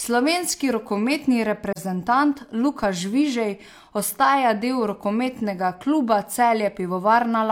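A soft-edged dropout breaks into this speech recording from 1.72 to 1.78 s. The sound fades out, leaves a hole of about 43 ms, and fades back in. This is AAC frame loss with muting. The gap matches the length of a single lost AAC frame, and the decoder filled that frame's spectrum with zeros. The overlapping transform windows on either side turn what would be a hard cut into a brief fade. At 2.83 s there is a low thump while the speech continues undisturbed. This is a DC step, where the waveform's zero line suddenly jumps to a new offset. The offset then dies away instead of holding, which fits a 20 Hz high-pass filter downstream bleeding the shift back toward zero.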